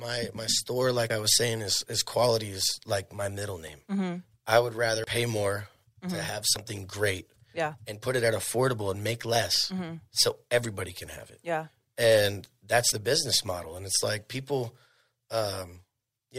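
At 1.1 s, 5.04 s, 6.56 s and 12.92 s the speech skips forward. This is likely a dropped buffer (overrun): incoming samples were overwritten before being read, so the audio on either side is spliced together directly. About 40 ms disappears each time, except at 5.04 s, between "I would" and "pay more", where roughly 70 ms goes. The 6.56 s and 12.92 s skips land just before "great yeah and put" and "the business model and". Unlike a dropout, no silent gap is left.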